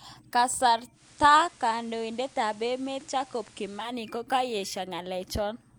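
At 0.92 s the speech shows digital radio blending to analogue: the receiver loses its digital stream and cross-fades over about 166 ms to the station's FM broadcast, returning at 3.94 s. In between, hiss rises to roughly 25 dB below the speech, and the level drops about 2 dB. A spectrogram shows a band of noise filling the gaps; the waveform steps down slightly.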